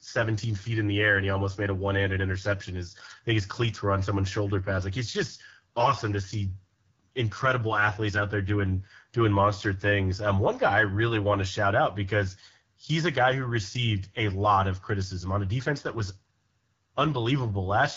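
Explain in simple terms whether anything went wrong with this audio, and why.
Something did go wrong. The whole recording passed through the AMR wideband (HD Voice) codec at one of its lowest quality settings. This phone codec squeezes speech into a tiny data stream by rebuilding it from a simple model. That makes the speech sound rough and raspy from start to finish.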